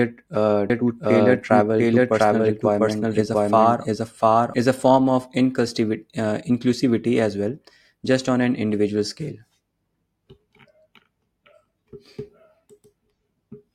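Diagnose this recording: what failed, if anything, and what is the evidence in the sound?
From 0.70 s to 4.54 s the speech runs twice: starting abruptly just before "is a form of", an unreverberant copy about as loud as the original trails it by roughly 0.7 s, then cuts off abruptly. This doubled audio track likely comes from a slower second capture path being mixed in.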